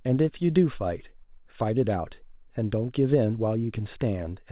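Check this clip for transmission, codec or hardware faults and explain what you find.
No faults found; the speech comes over a narrowband call path with nothing above 4 kHz, consistent with a WebRTC link on G.711 mu-law working as designed.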